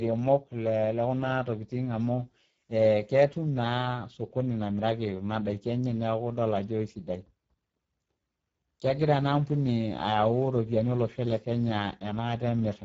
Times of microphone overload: none

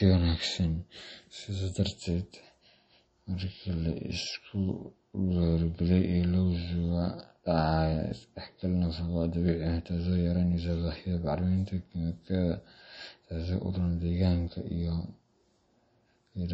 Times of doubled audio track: none

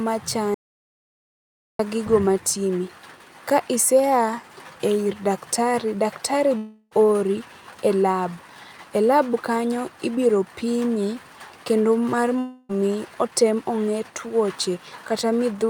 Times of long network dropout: 6.57-6.93, 12.39-12.71

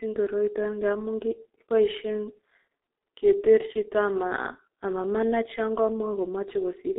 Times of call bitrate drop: none

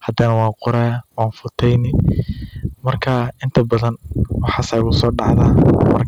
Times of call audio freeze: none

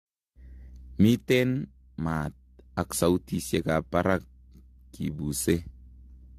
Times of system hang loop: none

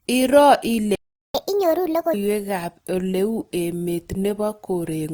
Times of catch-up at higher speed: 1.35-2.14

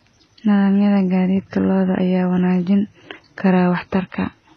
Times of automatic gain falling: none

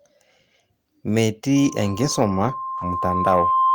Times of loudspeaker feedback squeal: 1.56-3.74

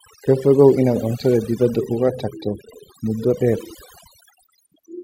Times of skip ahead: none

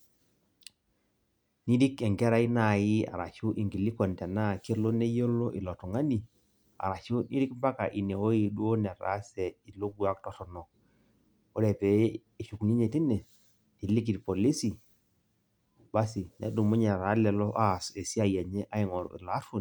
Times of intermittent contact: none

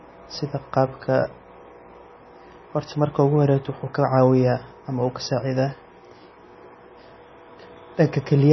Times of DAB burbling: none

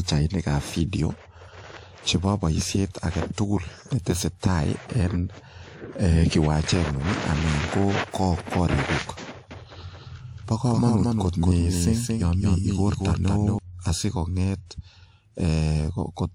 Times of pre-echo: 3.33-3.38, 4.39-4.42

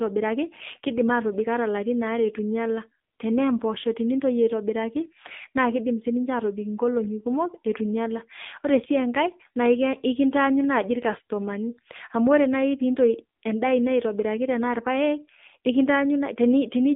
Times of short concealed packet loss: none

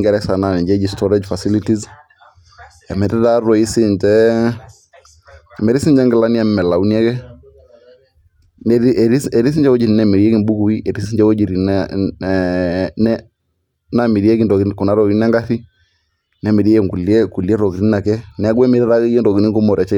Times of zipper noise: none

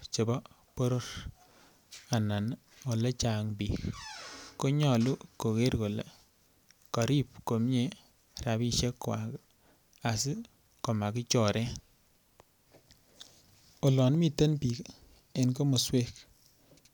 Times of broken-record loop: none

